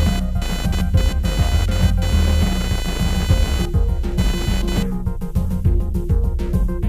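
From the start to 4.83 s, a buzzing, chirping rasp pulsing at around 500 Hz sits roughly 10 dB below the sound, rising and falling independently of it. This is computer activity noise: processor, graphics or mouse load shifting the shared audio ground.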